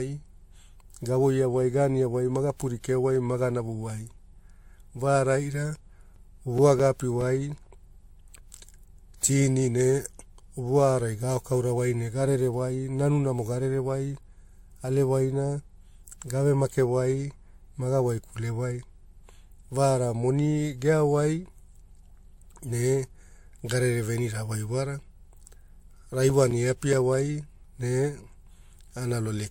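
Speech recording with nothing above 16.6 kHz and a layered, smeared coding texture, likely from transcoding between lossy codecs, consistent with a low-rate MP3 re-encoded to WMA. CD scratch ticks, brief clicks of a few milliseconds at about five per second, occur from 5.95 to 7.63 s and from 25.88 to 27.14 s, where a disc blemish defeated error correction on each rotation.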